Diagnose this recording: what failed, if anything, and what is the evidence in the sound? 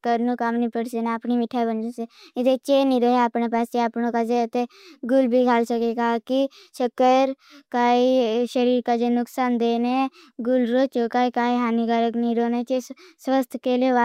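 Nothing failed; no faults heard.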